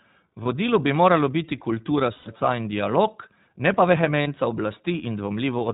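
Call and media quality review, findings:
iLBC codec, whole clip. Band-limited, nothing above 4 kHz; speech clear but rough, slightly synthetic, codec damage plainly audible. Narrowband VoIP path, sound consistent with iLBC at about 15.2 kbps in 20 ms frames. Each frame's excitation coded independently of the previous one.

Lost iLBC frames at 0.44–0.47 s, 2.14–2.28 s and 4.22–4.28 s. Held, buzzy, breathy vowel-like fill, longest and fading at 2.14 s. Packet loss, roughly one, six and two 20 ms frames. Decoder repeats the last pitch cycle mixed with noise. Recovery near-instant after each gap because frames decode standalone.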